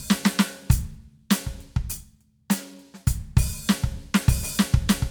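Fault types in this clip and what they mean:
No technical faults are present in this music clip, which comes across as an intact, continuous signal throughout.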